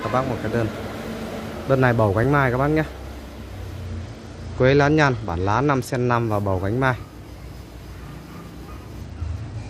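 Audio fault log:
0.75 s and 2.24 s, dropped buffer (overrun): two quick jumps where the sound skips forward a touch, with roughly 5 ms gone each time and no gap of silence. The likely cause is the capture side not reading its buffer before the hardware wrote over it. The audio either side of the lost piece gets butted straight together, and that hard discontinuity is what you hear as the jump. Each loss is short enough that you hear the jolt more than anything missing.
3.86 to 6.14 s and 9.01 s to the end, Bluetooth SBC bit pool drop: the treble goes dull and a gritty, grainy noise rises underneath. It clears after the first stretch, and the second runs on to the end. The sound points to the link falling from a bit pool of 28 to 11, about 90 kbps. That starves the upper sub-bands of bits and leaves everything else coarsely quantised, hence the muffled top and the grit.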